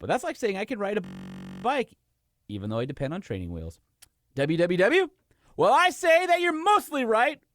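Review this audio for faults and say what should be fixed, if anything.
System hang loop, from 1.05 to 1.64 s, just after "I can ride a": the playback side stalled while the sound hardware kept replaying the same ring buffer, so one 21.33 ms slice repeats 28 times. That length fits a 1024-sample buffer, and at 46.9 repeats per second it becomes a steady, low buzz. Little or no audio seems lost; the speech picks up where it stopped. Give the audio thread real-time priority and a watchdog that mutes output when the buffer stops refilling.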